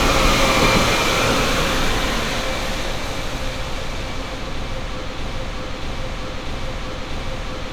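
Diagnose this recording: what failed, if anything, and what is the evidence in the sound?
Broken-record loop from 5.17 s to the end: a 0.64 s fragment repeats four times, likely a stalled playback buffer; the waveform shows identical repeating blocks.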